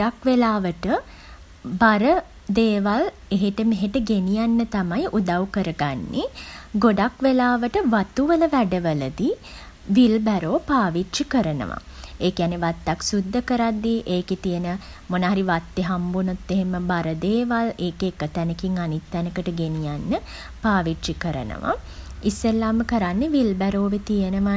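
No technical faults can be heard anywhere in the speech recording, and the signal stays continuous and steady throughout without any audible disruption.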